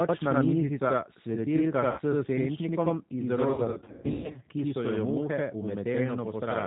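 From start to finish the speech carries a channel delay (doubling): one channel trails the other by about 85 ms, which fits a 4096-sample buffer, and summing the two to mono leaves a second copy of every syllable at equal level. Because the gap is well past the range where copies fuse into comb-filter colouring, it comes across as a distinct slap or doubled voice rather than a hollow, phasey tone.

Also present throughout is plainly audible G.729 codec damage, consistent with the 8 kbit/s G.729A variant. Everything above 4 kHz is gone, and the voice comes out rough and faintly synthetic because it is rebuilt from a filter, a pitch predictor and a few pulses rather than the original waveform. Unlike simple band-limiting, that synthetic buzz sits on the voice itself.

At 1.91 to 2.01 s, right after "mizica svetilka", VoIP packet loss concealed by the speech codec stretches the last sound out as it fades. 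About 60 ms of audio was missing and the decoder extrapolated its last pitch and filter while lowering the gain. Since each frame leans on the one before, the voice stays weak for a moment after the data returns, which sets this apart from a clean dropout.

From 3.54 to 4.38 s, ending just before "ki so", the same concealed packet loss returns in scattered form. About 480 ms is lost across roughly 800 ms, with the longest gap around 120 ms, so the speech breaks into repeated smears and dips with brief, still-weakened recoveries between them.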